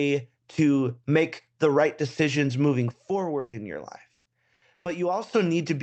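At 2.91 s the speech level drops abruptly by about 6 dB and stays down until 5.33 s, likely because one stereo channel dropped out. On a waveform the envelope visibly narrows for that stretch. The spectrogram shows the same content, only dimmer.

Within that stretch come bursts of packet loss at 3.39 to 3.56 s, 4.14 to 4.29 s, 4.54 to 4.65 s and 4.74 to 4.89 s. The receiver filled 140, 120, 80 and 120 ms by stretching the last sound and fading it, so each gap sounds like a held buzz or a fading hiss. The spectrogram shows smeared, frozen bands that decay. Afterwards the speech resumes later on, with 120, 120, 80 and 120 ms missing.

At 3.53 to 3.57 s and 4.86 to 4.90 s, a lost packet was rebuilt from error correction: 40 ms of low-bitrate copy with no gap but a rougher, noisier texture, seen as grainier patches on the spectrogram.

Throughout, the call codec's bandwidth stops at 8 kHz, which fits wideband Opus.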